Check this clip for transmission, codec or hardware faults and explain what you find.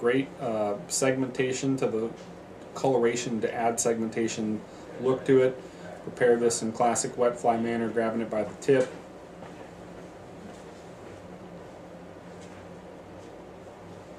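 No transmission, codec or hardware faults can be heard in this clip. Nothing in the sound points to a problem anywhere between capture and playback.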